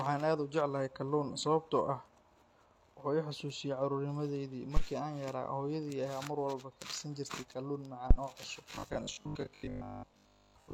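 A deep thump sounds from 4.77 to 4.83 s, just after "xasuusiyaa carruurnimadaydii", and again from 8.11 to 8.17 s, just before "oo cusub", each dying away in about 13 ms. This is phantom power thump: a supply switched on a live input sends a voltage step through the coupling capacitors.

From 8.71 s, right after "oo cusub", to 10.73 s the speech turns into a rigid, metallic buzz at 50 Hz that only loosely tracks the original. This is robotic sound from repeated short buffers, likely caused by new audio arriving too seldom so that the last chunk is replayed, which fits roughly 20 ms buffers. Most of that stretch consists of repeats.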